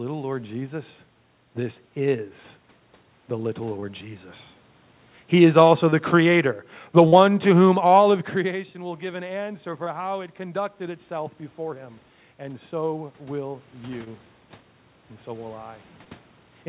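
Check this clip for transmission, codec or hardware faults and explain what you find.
Three faults show up: six short concealed packet losses, plus two automatic gain control swings, one pulling the level down and one pushing it back up.

Short concealed packet loss happens at 3.80 s (just after "the little"), 5.90 s, 7.08 s, 9.84 s, 14.04 s and 16.04 s (just after "and so will"). Most are 20 ms gaps. The one at 7.08 s is 40 ms. Each time a packet arrived too late, the receiver made up the gap by extending the last bit of speech and then blending back into the real audio. The result is a quick smear or wobble.

Automatic gain falling runs from about 5.33 s to 8.23 s. The gain control decided the input was too hot and eased its gain down by about 5 dB over roughly three seconds. The voice starts out loud and then gradually sinks, and the room background sinks right along with it. That shared drop is what gives it away as gain control rather than the talker changing how they speak.

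Automatic gain rising follows from about 8.80 s to 14.26 s. Around 8 s the talker seems to lean back, and the input drops by about 13 dB. The gain control responds by slowly adding about 7 dB, so voice and background swell together over several seconds. It only makes up about half of the drop, so the speech stays quieter than it was at the start. The narrow, phone-like top end, with nothing above 4 kHz, fits a G.711 call path.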